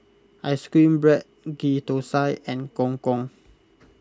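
Speech, with no audible faults.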